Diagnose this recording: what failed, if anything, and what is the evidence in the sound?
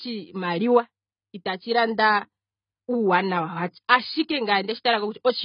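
The codec stage failed: the speech is band-limited and smeared for its whole length, with nothing above 5 kHz, a fizzy, warbling texture on sibilants and held vowels, and a dull overall tone. The likely cause is AAC compression, with AAC-LC at a bitrate that points to around 16 kbps, starving the quantiser. On a spectrogram, energy stops sharply at 5 kHz, with patchy holes and blotchy noise-filled bands below it.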